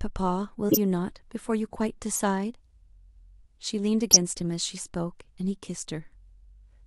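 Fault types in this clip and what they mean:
Corrupt frame decoded: damaged compressed frames were played as if valid, so misread gains and codes put energy at the wrong frequencies. In this speech it shows as three short chirpy noise bursts, at 0.69–0.78 s, 2.11–2.19 s and 4.11–4.17 s, each spanning a few frames. The last is the strongest. Unlike a dropout or concealed loss, the sound isn't smoothed over; foreign energy is added instead.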